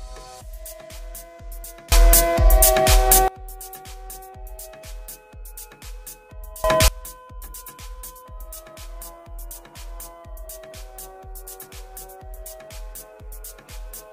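At 1.92 s the level leaps by about 24 dB until 3.28 s, then again from 6.64 to 6.88 s: a sudden gain jump, likely unramped digital gain, lifting sound and noise together.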